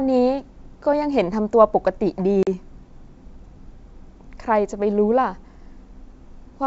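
At 2.43 to 2.48 s the speech drops into a hard-edged silent hole of about 40 ms, consistent with a few lost packets. This packet loss on an ADPCM call differs from a plain dropout: the speech resumes with brief, slight distortion while the decoder's predictor and step size resynchronise.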